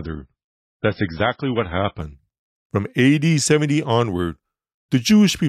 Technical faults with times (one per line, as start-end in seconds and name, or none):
0.00-2.00 adaptive stream starting at a low bitrate